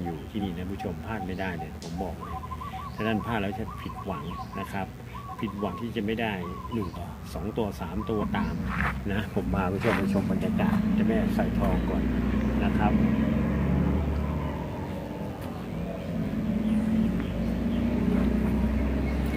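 A steady, thin 100 Hz buzz rich in harmonics runs under the whole clip, around 35 dB below the main sound. This is DECT cordless phone buzz: a nearby handset or base transmits a burst every 10 ms, and the audio circuitry rectifies it.

At 0.40 s, 2.25 to 2.28 s, 5.69 to 5.73 s, 6.95 to 6.98 s, 8.20 to 8.24 s, 13.96 to 13.99 s and 17.67 to 17.71 s, the audio jumps ahead with a brief blip or click. These are compressed frames skipped: roughly one frame at 0.40, 2.25 and 17.67 s, two at 5.69 s, four at 13.96 s, five at 8.20 s and seven at 6.95 s. The frames, which fit a length of about 46 ms, were missing or rejected by the decoder, so each jump drops from about 50 ms up to about 300 ms of sound.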